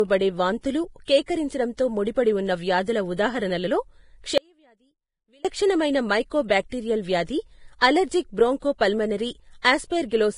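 Speech with heavy Vorbis compression throughout, likely from a low bitrate near 30 kbps. Nothing remains above 10.5 kHz, and the treble left below that limit is grainy and hissy rather than simply dull, which separates it from plain low-pass filtering. Pre-echo occurs at 1.05 to 1.08 s, 1.26 to 1.28 s, 6.48 s, 7.79 to 7.82 s, 8.78 to 8.81 s and 9.62 to 9.65 s. In each case a short hiss of 17 to 32 ms runs ahead of a sharp onset, because quantisation noise spreads backwards across the transform block. That leading position is what tells it apart from ordinary codec grain. From 4.38 to 5.45 s there is an audio dropout to a faint residue lasting about 1.07 s. The sound cuts off abruptly and leaves only a faint trace about 35 dB down, which points to the signal being lost while the path after the break stayed live. It is neither a natural pause nor a fade, and the gap is not true silence.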